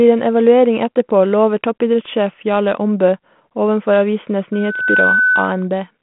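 From 4.53 to 5.68 s, a loudspeaker feedback squeal rises on a single 1.5 kHz tone, swelling over roughly 0.4 s to about the speech's level, unlike a steady interference whistle, as the mic-speaker loop runs away.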